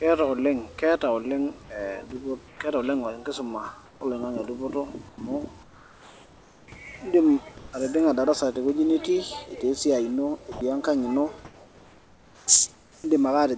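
Comfort noise in place of the background occurs at 2.48 s (120 ms), 3.86 s (150 ms), 5.09 s (90 ms), 5.63 to 6.68 s (just before "eidim atijing'a darasa tewueji") and 7.58 s (150 ms, just before "atijing'a darasa tewueji"). In each pause the real background, about 24 to 30 dB below the loud passages, gives way to a steady, featureless hiss. It is mostly about 3 to 7 dB quieter, but about 1 dB louder at 7.58 s. The likely cause is discontinuous transmission: the sender stops sending and the receiver fills the gap with synthetic noise.

Sound dropped by the voice detector occurs at 10.52 s. About 50 ms of sound is replaced by 90 ms of steady noise, likely because the detector mistook it for background and stopped sending.

Comfort noise in place of the background returns from 11.45 to 12.47 s and from 12.74 to 13.04 s. The same flat hiss replaces the background, about 2 to 3 dB quieter, with nothing above 8 kHz, which fits the G.722 call path.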